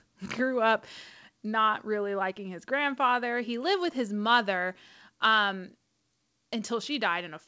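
At 6.12 s, the input gain was likely stepped down by the call software, a microphone volume step-down, so speech and background drop together by about 2 dB.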